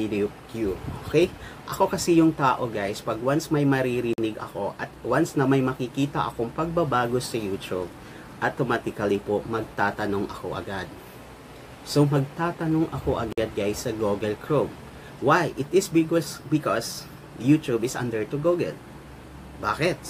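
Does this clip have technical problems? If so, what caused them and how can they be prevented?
Yes. There are two gaps at joins of encoded pieces, one from 4.13 to 4.18 s (about 48 ms) and another from 13.33 to 13.38 s (about 52 ms). The sound drops to silence with smeared edges, then picks up right where it left off. It looks like the pieces were encoded separately and butted together untrimmed, so each one's start-up delay and final-frame padding stayed in. To avoid it, encode the whole thing in one pass or trim the delay and padding before joining.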